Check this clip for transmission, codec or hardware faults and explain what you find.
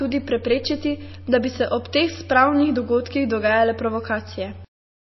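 One fault runs through the whole speech clip: what sounds like MP3 compression, present from start to finish.

The speech has nothing above 5.8 kHz, a hard treble cut-off, and the codec damage is plainly audible as a watery, swirling texture, which fits a low bitrate of around 24 kbps. Short of bits, the encoder likely dropped the upper band entirely and zeroed weak frequency lines, which flicker on and off between frames. That flickering separates it from a simple low-pass filter or a narrowband link, which dulls the treble but leaves no swirl.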